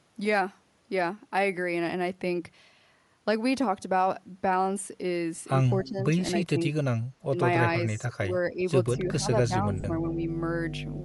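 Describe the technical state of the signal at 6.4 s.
At 6.4 s the speech is inside a brief gap from 6.35 to 6.6 s where it is pulled down by around 20 dB, in pieces adding up to roughly 150 ms. This is speech suppressed in double talk, likely the echo canceller ducking the near talker because it could not separate that voice from loudspeaker echo while the far side was also talking. Unlike a dropout or packet loss, the level sinks and recovers in a gated way rather than repeating audio.

Running through this moment, as across the whole clip, is a plainly audible grainy, breathy edge on the speech, with the upper spectrum thinned and filled in with noise. That points to Bluetooth LC3 compression, likely at around 48 kbps with 10 ms frames. This transform codec trades high-band detail for noise fill. What sets it apart from MP3 or AAC artefacts is that it produces a steady noisy sheen rather than swirly, warbling artefacts.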